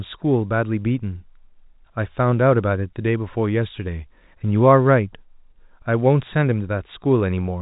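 No technical faults are audible.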